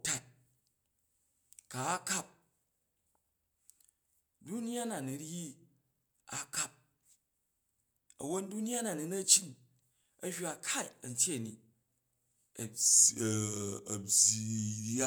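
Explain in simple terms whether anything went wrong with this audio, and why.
From 12.81 s to the end at 15.07 s, the speech suddenly sounds deeper and slower, dropping about two semitones. This is a section at the wrong speed, playing at 0.893 times normal speed, likely because that part was fitted to the wrong clock.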